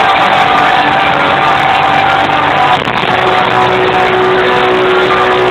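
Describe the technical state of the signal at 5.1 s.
At 5.1 s the signal is intact, with no audible dropout, distortion or other technical fault at that moment.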